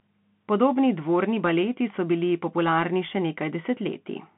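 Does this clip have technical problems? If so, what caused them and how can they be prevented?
Yes. Throughout the speech the sound is thin and boxed in, with no content above about 3.8 kHz, a granular hiss beneath it, and s sounds that turn scratchy, while louder bright passages break up. This is the Bluetooth CVSD headset codec: each sample gets a single up-or-down bit with an adapting step, which fits a 64 kbps link, and fast high-frequency movement outruns that step. To prevent it, record on the device's own microphone or a wideband Bluetooth mode instead of the headset call profile.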